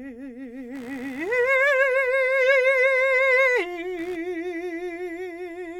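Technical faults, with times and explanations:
0.75–4.16 s, computer activity noise: shifting processor or peripheral load disturbs the ground shared with the audio circuit, injecting a buzzy chirp pulsing around 70 times a second, roughly 30 dB beneath the music, which rises and falls with the computer's activity rather than with the music.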